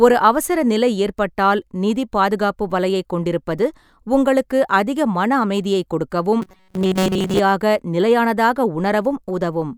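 From 6.42 to 7.39 s the speech takes on a robotic sound from repeated short buffers. It becomes a rigid, metallic buzz pitched at 188 Hz. The likely cause is a segment of about 5.3 ms being replayed while fresh audio is skipped, for most of that stretch.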